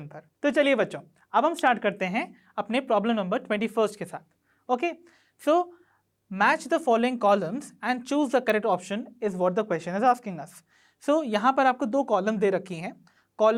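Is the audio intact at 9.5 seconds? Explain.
Yes, at 9.5 seconds the audio is intact, with no dropout, click, distortion or other fault to be heard at that point.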